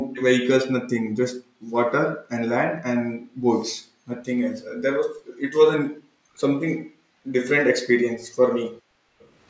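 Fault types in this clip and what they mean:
Background gated by the echo canceller: the room tone behind the speech is pushed down by as much as about 40 dB and then returns, in four stretches between 0.0 and 9.21 s. Unlike a dropout, only the background disappears while the speech carries on.
Echo leak: a faint, distinct repeat of the speech, about 15 dB below it and trailing by 380 ms, appears briefly from 0.13 to 0.24 s. It is likely loudspeaker sound the far end's echo canceller let through. Unlike reverberation, it is a separate delayed copy rather than a smooth tail.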